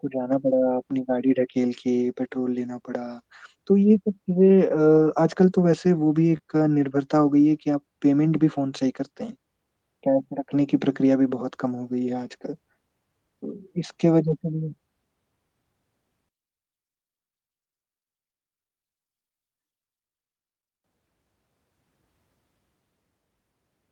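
Speech, with two kinds of network damage and one channel-polarity problem. At 2.69–2.71 s, 8.37–8.39 s and 10.57–10.59 s, a lost packet was rebuilt from error correction. Each time, 20 ms of the voice turns briefly coarse and grainy while the sound keeps flowing, because the decoder played the low-bitrate backup copy carried in the next packet. At 14.27–14.33 s the same roughening lasts about 40 ms, which fits two packets rebuilt this way. What separates these from concealment is that the real content is there, only rougher. At 6.37–6.41 s there is a short concealed packet loss. About 20 ms never arrived, and roughly 15 ms of it was filled by stretching the preceding sound forward before blending back, so it comes across as a small smear or wobble rather than grit. Unlike the rebuilt frames, the original detail in that slice is simply gone, not degraded. From 16.29 to 20.84 s the voice drops by about 22 dB to a faint copy, as though only the small mismatch between the channels remains. 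The likely cause is one channel inverted, with the centred voice cancelling when the two channels are summed to mono. That sets it apart from a plain level drop or dropout, where the remaining sound would keep its normal body.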